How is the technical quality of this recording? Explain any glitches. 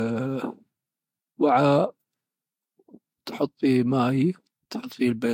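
The speech carries a compression fault through all of it, so the technical quality is compromised. From start to finish the sound has the mixed smearing and swirl of transcoding between lossy codecs, likely an HE-AAC encode re-encoded to Vorbis. The second codec spends bits re-encoding the first one's artefacts and adds its own. A spectrogram shows a hard ceiling at 16.6 kHz with blotchy, patchy high bands beneath it.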